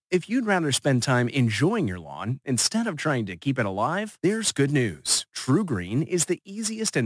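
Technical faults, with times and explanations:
Throughout, aliasing: sibilants sound gritty and metallic because content above 11 kHz folds back into the band, roughly 20 dB below the speech, which fits resampling to 22 kHz without filtering. Unlike plain band-limiting, the spectrum stays full right up to 11 kHz.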